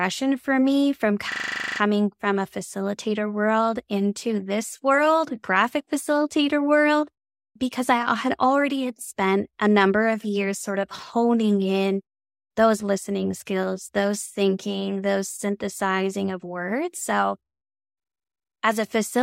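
From 1.32 to 1.8 s, just after "for me from", the speech turns into a rough 25 Hz buzz before resuming with "from a facilitator world". This is a system hang loop: the system froze while the hardware replayed one 40 ms buffer twelve times, losing little or no audio.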